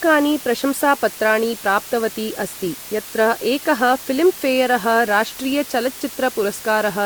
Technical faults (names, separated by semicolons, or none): low bit depth with dither